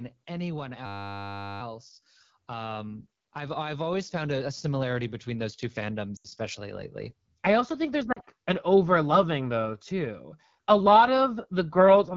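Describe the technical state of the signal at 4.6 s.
At 4.6 s the speech is partway through an automatic gain rise that runs from 2.47 s to 10.27 s. The automatic gain control has judged the input too quiet and is lifting its gain slowly, by about 12 dB across that span. Voice and background noise swell together, which separates it from a speaker simply moving closer or talking louder. In that case the background would stay put while the voice grew. The change is also a gradual ramp rather than a sudden level step.

Underneath, the whole clip passes through the AMR wideband (HD Voice) codec, and the damage is plainly audible. The speech has a rough, raspy texture that points to one of the codec's lowest modes, around 8.85 kbit/s. The codec models speech up to 6.4 kHz and fills the band from 6.4 to 7 kHz with shaped noise. That gives the top end a hissy, synthetic edge rather than the dull, band-limited sound of narrowband telephony.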